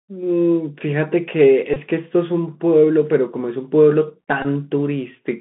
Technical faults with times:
0.00-5.40 Bluetooth CVSD headset codec
1.74-1.77 Bluetooth headset packet repeated
4.42-4.46 Bluetooth headset packet repeated

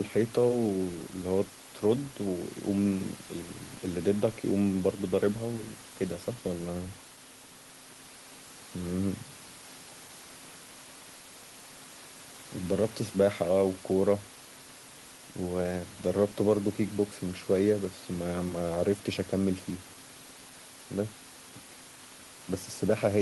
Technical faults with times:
none

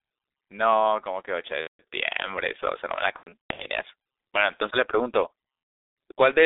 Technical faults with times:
0.00-6.45 G.723.1 codec
1.61-1.81 VoIP packet loss concealed by the speech codec
3.18-3.68 VoIP packet loss concealed by the speech codec
5.57-5.96 VoIP packet loss concealed by the speech codec

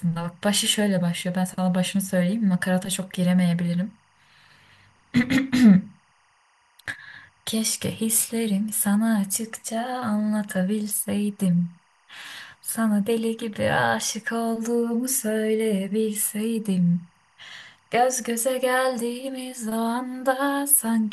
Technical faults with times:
0.00-21.12 timecode bleed

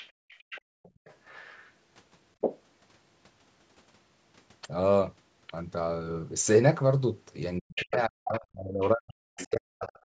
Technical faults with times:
0.00-1.70 other side's voice leaking through
0.12-1.05 background gated by the echo canceller
2.41-2.60 other side's voice leaking through
7.59-9.83 speech suppressed in double talk
7.76-9.99 other side's voice leaking through
10.11-10.15 background gated by the echo canceller

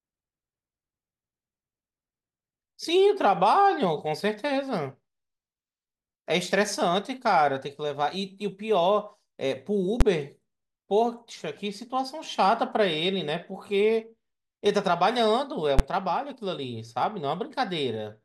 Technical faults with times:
10.01 invalid numbers at full scale
15.79 invalid numbers at full scale

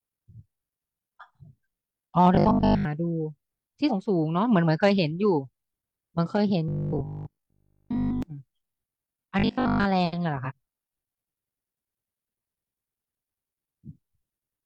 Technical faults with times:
2.35-2.85 robotic sound from repeated short buffers
3.86-3.91 compressed frames skipped
6.68-8.22 robotic sound from repeated short buffers
9.39-9.85 robotic sound from repeated short buffers
10.41-10.52 compressed frames skipped

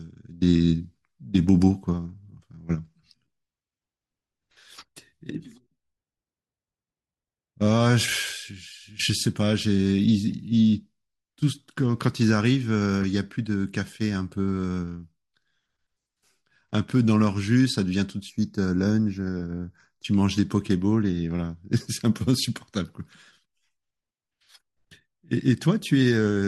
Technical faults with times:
5.38 corrupt frame decoded
8.33-8.35 corrupt frame decoded
10.32 corrupt frame decoded
13.02-13.04 corrupt frame decoded
18.30-20.04 channel delay (comb filtering)

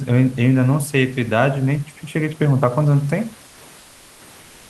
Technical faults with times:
3.47-4.19 comfort noise in place of the background

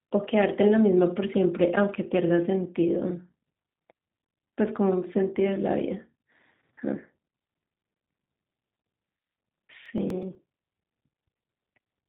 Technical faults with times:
0.00-12.09 G.729 codec
7.15-11.95 periodic USB or driver dropouts

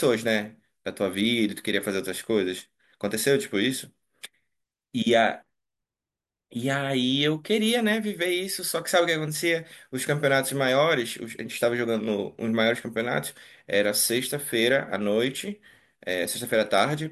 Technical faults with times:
none

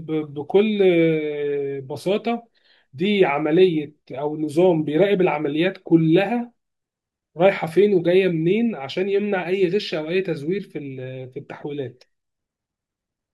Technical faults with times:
none

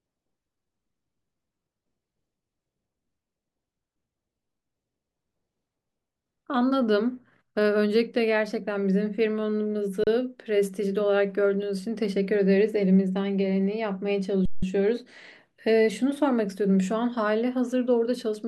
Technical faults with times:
10.04-10.07 underrun with held sample
14.45-14.62 underrun with held sample

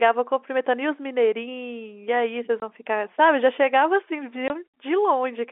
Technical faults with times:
2.60-2.62 packet loss filled with silence
4.48 packet loss filled with silence

